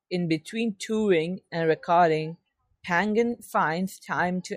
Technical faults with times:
none

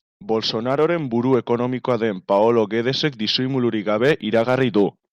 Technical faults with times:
0.70-0.85 hard clipping
1.33-1.52 hard clipping
1.90-1.93 hard clipping
2.32-3.30 hard clipping
4.04-4.83 hard clipping

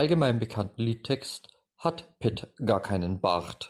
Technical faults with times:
none

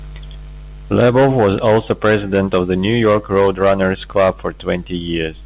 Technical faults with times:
none

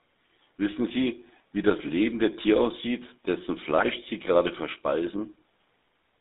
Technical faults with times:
0.00-6.21 GSM full-rate codec
3.78-3.86 GSM bit errors
4.21 block of digital silence

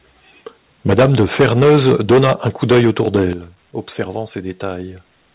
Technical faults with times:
0.88-3.26 microphone overload
0.93 microphone volume stepped down
3.33 microphone volume stepped down

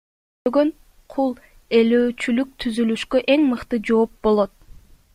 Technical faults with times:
0.00-0.46 cut-off start

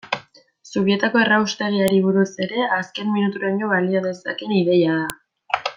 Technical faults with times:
1.88 file header played as audio
5.10 file header played as audio

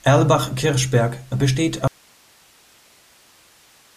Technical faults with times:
1.87-3.96 audio dropout to a faint residue

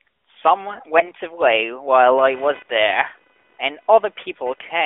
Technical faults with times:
0.98-1.11 AMR bit errors
2.17-4.85 computer activity noise

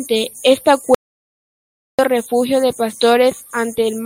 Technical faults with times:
0.94-1.99 audio dropout to silence

